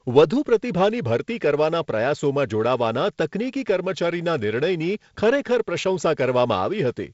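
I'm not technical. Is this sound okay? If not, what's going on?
Yes, nothing stood out as wrong when listening to this speech recording.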